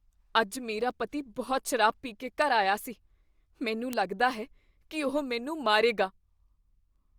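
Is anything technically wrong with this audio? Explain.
Yes. Word clock ticks run from 0.91 s, just after "ਅੱਜ ਮੇਰਾ", to 6.96 s. The receiving device runs on its own clock, not locked to the sender's. Roughly every one and a half seconds the clocks slip one sample. Each slip is a sharp tick, about five in all, of uneven strength.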